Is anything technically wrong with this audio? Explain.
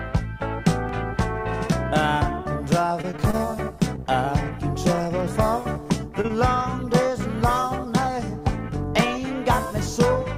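Yes. Between 3.01 and 3.42 s there is repeated packet loss, producing a robotic sound. Packets failed to arrive in time again and again, and the receiver kept bridging each hole by extending the last sound it had. Across that 0.4 s stretch, about 120 ms was synthesised, nearly a third of the span, with no single gap longer than 29 ms. Because the patches come in quick succession, the audio turns choppy and mechanical, with fragments missing.

Short concealed packet loss follows at 5.73–5.77 s, 6.21–6.26 s and 6.28–6.31 s. Each time, roughly 20 ms of data never reached the decoder. The receiver filled each gap by continuing the preceding sound, then blended back into the real signal. The last two events sit only hundredths of a second apart. Each is heard as a brief smear or wobble.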